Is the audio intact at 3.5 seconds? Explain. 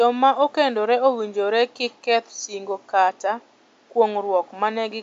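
Yes, the audio is intact at 3.5 seconds: the speech there carries no system fault, and the only other sound is the room's own background noise, sitting about 38 dB below the speech as part of the recording.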